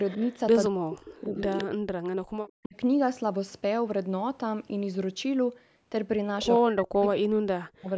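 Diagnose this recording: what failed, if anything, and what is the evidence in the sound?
Echo leak in call processing: a copy about 10 to 30 dB below the speech, trailing it by a fixed 172 ms at 0.08–1.02, 1.47–1.64, 2.46–2.66, 6.45–6.59 and 7.01–7.05 s, likely from a loudspeaker's echo canceller. The fixed delay separates it from room reverb.

Speech suppressed in double talk, also call processing: the talker dips by up to about 40 dB at 0.69–2.04, 2.63–2.75 and 6.63–7.89 s, likely from echo suppression during overlap. These are dips alongside the echo, not packet-loss gaps.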